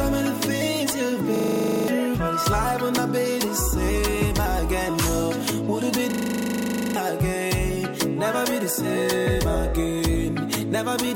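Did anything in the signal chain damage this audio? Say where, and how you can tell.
Yes, a system hang loop at 1.36–1.88 s and 6.12–6.96 s, at the driver or buffer stage. The same 40 ms slice repeats exactly at 25 Hz, as the hardware kept replaying its ring buffer while the system stalled, losing about half a second, then about a second.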